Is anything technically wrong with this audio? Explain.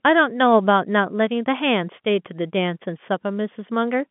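No, no technical faults.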